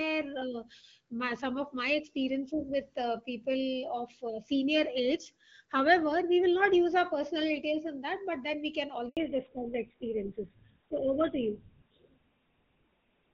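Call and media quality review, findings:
Handover gap at 9.09–9.17 s, right after "but then we can". Audio cuts out for 80 ms while the call switches networks. No frames arrive, so that stretch is lost.

Fallback to narrowband from 9.17 s to the end. Nothing above 4 kHz remains, so the speech sounds duller and rougher. The wideband codec before it sounds like about 12.65 kbit/s, and the switch fits GSM full rate.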